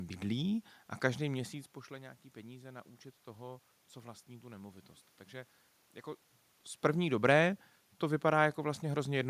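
No technical faults can be heard in this recording.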